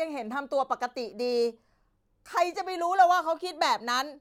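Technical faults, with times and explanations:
No technical faults detected.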